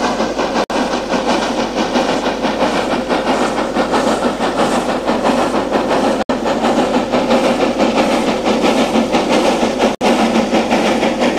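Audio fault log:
0.64 to 0.70 s, 6.23 to 6.30 s and 9.95 to 10.01 s, gap at a join of encoded pieces: continuous sound drops into silence of about 59, 68 and 62 ms, then resumes where it stopped, because untrimmed encoder start delay and last-frame padding sit between separately encoded segments. The waveform shows flat-line holes and the spectrogram shows blank vertical bands, their edges smeared by the codec.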